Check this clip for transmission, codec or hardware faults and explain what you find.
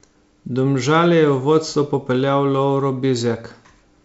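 No transmission, codec or hardware faults are audible; the speech sits on an ordinary G.722 wideband path at 64 kbit/s, clear up to about 7 kHz with at most a faint trace of the coder in the upper band.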